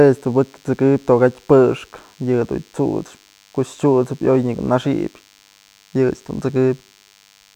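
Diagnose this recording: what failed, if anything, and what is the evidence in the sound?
The analogue stage failed: a DECT cordless phone buzz runs under the speech for the whole clip, a thin, steady 100 Hz buzz well below the talker. Radio bursts every 10 ms are rectified in the audio circuit. Unlike smoother mains hum, it is dense with harmonics.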